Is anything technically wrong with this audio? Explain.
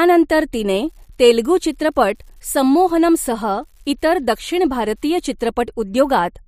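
Yes. From about 0.71 s to 5.20 s the speech carries an unreliable data bit fault. One line of the digital data path is marginal, so a single bit flips in a random share of samples, and each flip adds a spike of the same fixed size to the waveform. Because the errors come from the hardware rather than the signal, they sound as a steady crackle or fizz that continues through the pauses between words as well.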